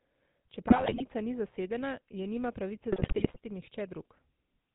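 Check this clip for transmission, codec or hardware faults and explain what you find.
Two faults are audible: codec damage across the whole clip and two bursts of corrupted decoding.

GSM full-rate codec: From start to finish the speech has a buzzy, gravelly roughness and nothing above 4 kHz. The first GSM codec models the vocal tract and excites it with sparse regular pulses, which fits a 13 kbps full-rate link.

GSM bit errors: From 0.68 to 1.03 s, just before "ni zasedena je nima", and from 2.92 to 3.38 s, right after "zasedena je nima pravice", the speech breaks into squawks, pops and gargling. Flipped bits corrupt the decoder's filter, pitch and gain values frame by frame, consistent with a few percent of bits in error.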